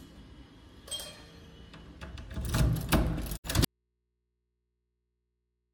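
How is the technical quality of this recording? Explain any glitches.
The quality breaks down late in the clip: two faults hit within about a third of a second of each other, and the sound never recovers.

A digital broadcast dropout runs from 3.36 to 3.46 s. The receiver stopped getting usable frames, either because the signal vanished or because frames failed their error check, so it muted rather than play corrupt data. About 64 ms of audio is lost, which fits a couple of discarded frames. The sound fades down over roughly 20 ms into a brief silent hole, and whatever was sent during it is gone.

An audio dropout to a faint residue begins at 3.65 s and lasts to the end. The sound cuts off abruptly, with no taper like a natural pause or fade. What remains is mains hum, around 50 dB below the earlier level. That points to the wanted signal being lost upstream while the stages after the break stayed powered, with the hum most likely coming from an input left open and unterminated.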